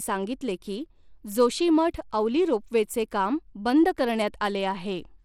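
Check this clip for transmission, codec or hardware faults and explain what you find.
One codec fault runs through the whole clip: the damage is plainly audible from start to finish, and likely comes from Bluetooth SBC compression. Nothing remains above 17.3 kHz, and the upper bands flicker with a gritty, coarsely quantised texture laid over the speech. SBC splits the signal into a few wide sub-bands and hands out bits without a hearing model, so a tight bit budget, consistent with around 96 kbps, starves the top bands. Unlike a clean low-pass cut, the treble here is unsteady and grainy.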